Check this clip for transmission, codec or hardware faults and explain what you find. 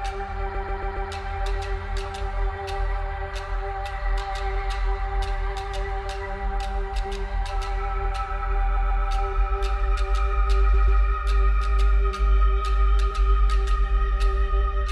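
Repeated frames turn up three times: 0.54–1.09 s, 8.76–9.03 s and 10.73–11.01 s. A block of about 139 ms is replayed, four extra times in the first case and twice in the others, so it stutters.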